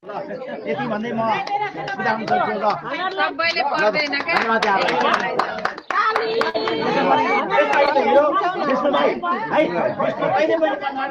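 At 6.49 s a burst of packet loss runs to 6.56 s. Several packets arrived too late or not at all. The receiver stretched the last sound for about 46 ms, fading it. About 40 ms of audio is simply gone when playback resumes.

At 7.86 s a short concealed packet loss lasts until 7.89 s. The decoder patched roughly 12 ms by extending the preceding sound, then blended back. It is heard as a brief smear or wobble, with about 20 ms missing.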